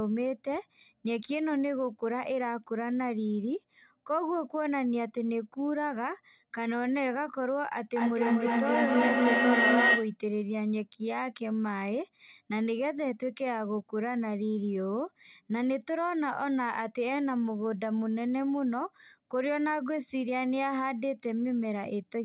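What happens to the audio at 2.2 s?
Nothing goes wrong at 2.2 s: the speech there is intact, carried by the call path as normal and band-limited with nothing above 4 kHz, which fits a G.711 mu-law telephone codec at 64 kbps.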